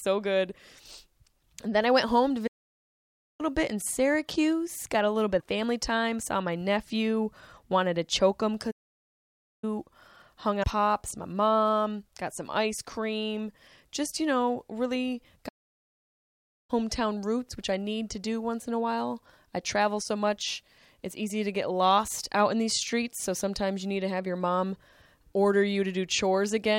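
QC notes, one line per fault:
2.47–3.41 s, 8.71–9.64 s, 15.48–16.70 s, playback stall: the player most likely ran short of buffered data or had its output thread held up, so it stopped feeding the output. The speech drops to silence mid-flow for about 0.92 s after "I went home to", picking up at "bit in", again for about 0.92 s after "to choke him", and for about 1.2 s at 15.48 s.
5.37–5.42 s, 10.60–10.64 s, damaged data in a compressed stream: corrupted bytes in the encoded stream made the decoder misread frames, lose sync and hunt for the next valid frame header. Each spot is a brief glitch of roughly 45 to 50 ms. The first falls between "a little bit" and "family time", and the second is a similar short glitch at 10.60 s.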